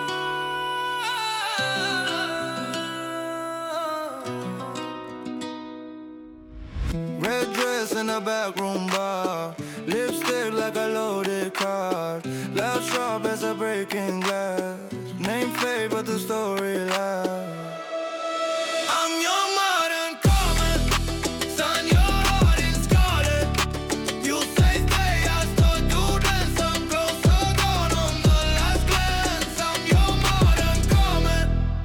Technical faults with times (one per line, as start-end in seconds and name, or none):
13.09 bit error spike